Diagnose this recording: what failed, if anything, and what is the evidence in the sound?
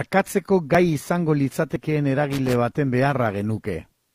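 The streaming stage failed at its segment joins: neighbouring 1-second segments carried overlapping time stamps, and the player trimmed the overlap even though that audio was never duplicated. Short stretches of the speech disappear, and the waveform jumps across the gap, giving a small click or skip at 0.75 to 0.78 s, 1.76 to 1.79 s and 2.72 to 2.75 s. Each loss is roughly 27 to 37 ms, and the faults recur about once a second, matching the segment length.

A fault in the analogue wiring, most likely a worn or dirty connector, causes a loose connector crackle from 2.32 to 2.55 s. The contact rapidly makes and breaks as it shifts, chopping the signal into fragments, and any DC present on the line adds pops at each transition. The result is an irregular burst of scratchy crackle lasting about a quarter of a second. Unlike the evenly spaced segment clicks, it has no regular timing.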